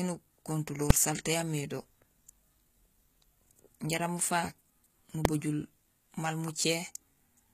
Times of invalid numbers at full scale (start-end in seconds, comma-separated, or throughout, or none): 0.90, 5.25